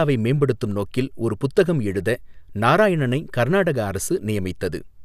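No technical faults can be heard in the speech. Nothing along its length calls for a time mark or a description.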